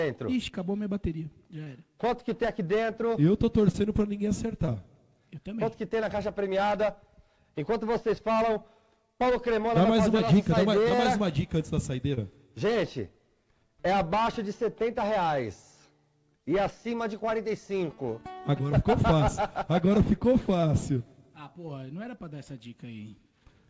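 Short concealed packet loss occurs at 1.64, 3.72, 4.66, 10.17, 10.89, 12.14 and 20.61 s, each a gap of about 20 ms that the receiver bridged by extending the preceding sound. Each is heard as a brief smear or wobble against audio band-limited to 8 kHz.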